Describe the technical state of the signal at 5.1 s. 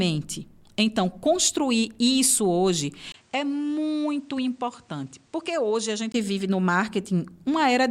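At 5.1 s the speech sits inside a stretch from 3.12 s to 6.14 s where the input has likely switched to a poorer device: a 20 ms gap, then nothing above 10 kHz, a duller tone, level down about 5 dB, and a new noise floor roughly 35 dB under the signal.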